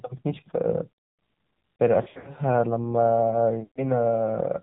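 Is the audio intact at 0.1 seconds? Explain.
No. The AMR narrowband mobile codec damages the speech at 0.1 s and throughout. A vocal-tract model excited by sparse pulses rebuilds each 20 ms frame, with nothing above 4 kHz, and the low rate, which suggests about 7.4 kbps, makes the voice plainly buzzy and synthetic.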